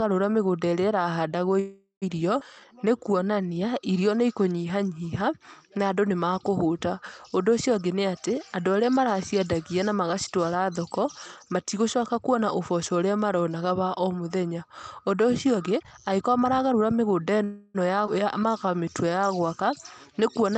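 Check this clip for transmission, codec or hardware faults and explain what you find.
Two bursts of network trouble show up in this speech, one near the start and one near the end. Both follow the same freeze, skip, slow-down sequence, with a speed-up leading into the second. The audio is band-limited to about 8 kHz, which fits a wideband call codec doing its normal job.

Call audio freeze, at 1.59–2.04 s and 17.44–17.76 s. Packets were most likely held up and the jitter buffer ran dry, so the receiver stretched the last sound into a fading buzz. The first freeze lasts about 0.42 s and ends in 0.13 s of silence. The second lasts about 0.3 s and doesn't go fully quiet. Nothing is lost, since the speech just resumes late.

Skip ahead, at 2.40–2.42 s and 18.06–18.09 s. Shortly after each freeze, a stretch of audio was dropped while later audio was already waiting, so playback caught back up. 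Roughly a tenth of a second of speech is gone each time, and the two sides are butted together with almost no gap, so you hear an abrupt jump.

Jitter buffer slow-down, at 2.53–3.49 s and 18.40–19.35 s. Running low or having just raised its target delay, the buffer rebuilt its reserve by repeating single pitch periods over and over. The speech plays at about 90% and 89% speed with unchanged pitch, which makes it slightly drawn out. The first instance adds 100 ms and finishes just before "irio nĩ". The second adds about 114 ms.

Jitter buffer speed-up, at 15.56–17.43 s. Here the buffer was holding more audio than it wanted and trimmed tiny pitch-period chunks repeatedly, roughly a third of a second in total. The speech runs at about 117% speed without any pitch shift, so it comes across as noticeably hurried.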